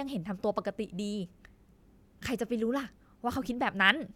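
Listening to the speech recording, nothing stood out as technically wrong at any point.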